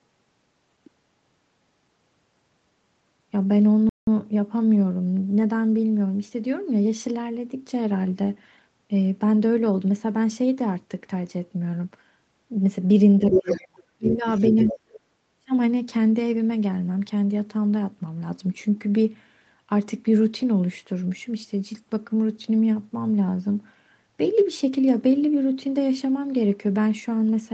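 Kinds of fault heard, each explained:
Playback stall: At 3.89 s the sound stops dead in mid-flow and stays silent for about 180 ms before continuing at 4.07 s. The likely cause is the player running short of data or its thread being held up, so nothing reached the output. Unlike a double-talk dip, the gap is complete silence for everything at once. It also has nothing to do with a second voice.
Speech suppressed in double talk: The talker's speech sinks sharply from 13.19 to 14.25 s, by roughly 35 dB at its deepest. There is a shallow dip of about 15 dB from 14.64 to 14.78 s and a deep one of about 40 dB from 15.19 to 15.52 s. These drops likely come from the echo canceller clamping down while both sides talk. Unlike a stall, the dips cluster around the other voice and are not clean, full gaps.
Other side's voice leaking through: A second voice breaks into the recording from 13.30 to 13.67 s at about the talker's own level. 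It returns from 14.05 to 14.15 s about 5 dB lower and from 14.36 to 14.99 s about 10 dB lower. This is likely loudspeaker sound the echo canceller failed to remove from the microphone. It differs from an ordinary background talker because it arrives in scraps, partly at the same moments the main speech is being suppressed.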